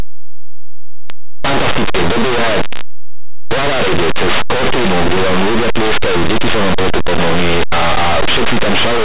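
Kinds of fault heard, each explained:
Linear audio read as companded: The plain 8-bit speech is decoded as mu-law, so tiny values on one side of zero become the largest outputs. The result is loud, harsh distortion throughout.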